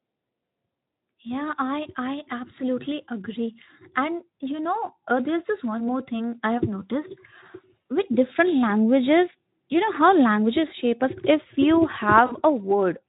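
At 7.81–7.83 s and 12.25–12.36 s, VoIP packet loss concealed by the speech codec: the decoder extrapolates over roughly one and then three lost 20 ms frames, producing a brief, fading buzzy smear over the lightly Speex-coloured speech.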